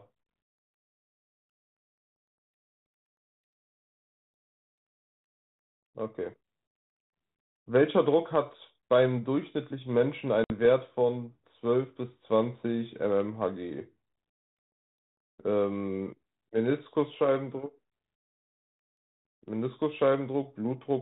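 At 10.44 s the speech drops into a hard-edged silence lasting until 10.52 s, and it comes back unsteady and slightly distorted, settling within some tens of milliseconds. This is packet loss on an ADPCM call. About 60 ms of audio, roughly three packets, went missing on this G.726 link at 32 kbit/s. The gap was filled with silence, and the decoder's adaptive predictor and step size drifted away from the sender's. The recovery is the decoder falling back into step.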